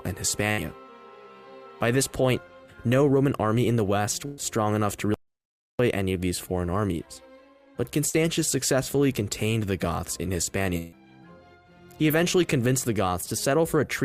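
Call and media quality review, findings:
Held, fading buzz-hiss at 0.51–0.60 s, 4.26–4.40 s and 10.77–10.94 s, then sound resumes further on. Burst of packet loss in the network/jitter buffer path: about 60, 120 and 140 ms missing, each filled by decaying concealment of the last frame.

Complete silence, no room tone, 5.14–5.79 s (650 ms), sound cutting out and returning mid-flow. Audio dropout to silence, likely from capture input loss such as a device disconnect or mute, with the encoder writing silence.

Brief smear at 8.10–8.15 s. Short concealed packet loss at the decoder: about 40 ms arrived too late, patched by extrapolating the preceding sound and crossfading back.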